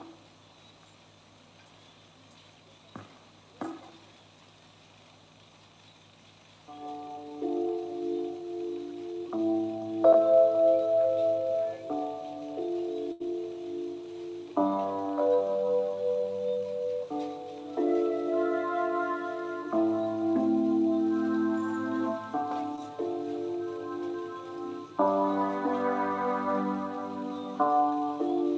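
The audio passed through a call path, and its band stops at 8 kHz, which fits G.722 at 64 kbps. There is a burst of packet loss from 13.12 to 13.22 s. Packets arrived too late or not at all, and the receiver filled a gap of 80 ms. It extended the last sound and faded it down, giving a held buzz on a voiced sound or a fading hiss on others. Then the audio picks up again, with 80 ms of the original gone. A short concealed packet loss follows at 22.76 to 22.79 s. Here 20 ms of audio never reached the decoder in time. The receiver covered it with 13 ms of continued sound, built from the last pitch or as shaped noise. It then blended back into the real signal. The result is a brief smear or wobble where a moment of sound drops out.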